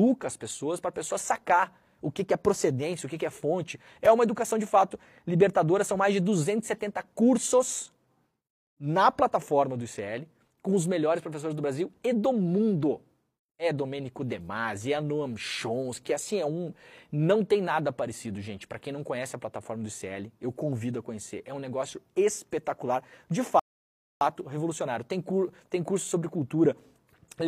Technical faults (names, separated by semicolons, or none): rebuffering stall